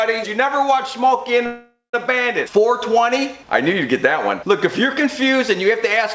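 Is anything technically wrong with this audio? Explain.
Yes. From 1.46 to 1.95 s there is a call audio freeze. The last sound is extended as a fading buzz ending in about 160 ms of silence, likely because delayed packets emptied the jitter buffer. Playback then resumes where it stopped, so nothing is lost, but everything afterward runs about 0.47 s late. The empty band above 8 kHz fits the G.722 call path.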